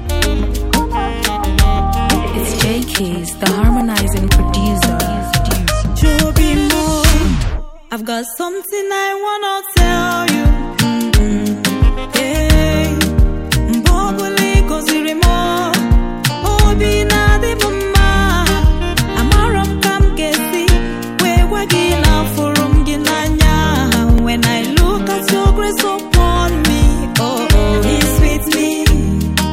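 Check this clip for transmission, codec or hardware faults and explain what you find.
Two brief dropouts of the same kind are present.

A block of digital silence occurs at 3.81 s and again at 24.18 s. Each time the signal drops to silence for about 0.73 ms, which fits a 32-sample block left unwritten when the output buffer wasn't filled in time. The audio jumps to silence and back with no fade, so each edge produces a discontinuity. At this length the gap registers as a single sharp tick rather than an audible hole.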